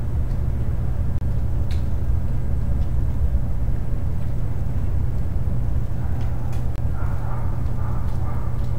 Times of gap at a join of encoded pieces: 1.18-1.21, 6.76-6.78

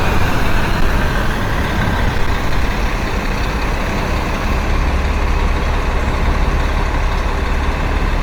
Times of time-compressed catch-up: none

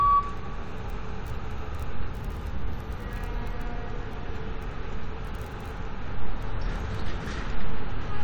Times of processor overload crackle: none

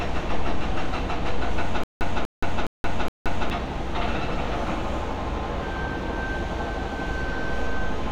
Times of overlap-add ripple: none

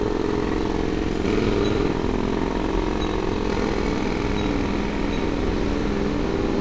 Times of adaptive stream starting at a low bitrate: none

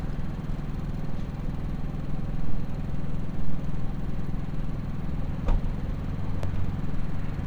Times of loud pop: 6.43-6.47

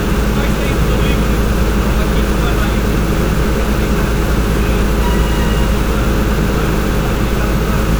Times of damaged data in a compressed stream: none

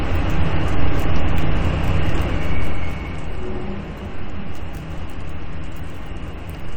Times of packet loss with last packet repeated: none

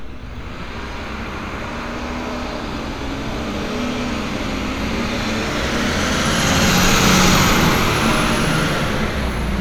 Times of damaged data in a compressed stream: none

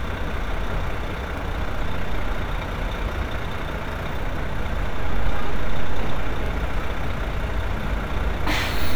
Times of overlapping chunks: 1.38-1.42, 3.92-3.96, 6.46-6.51

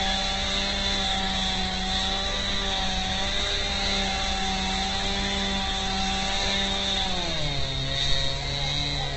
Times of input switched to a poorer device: none

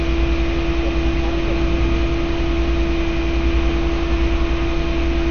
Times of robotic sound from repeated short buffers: none

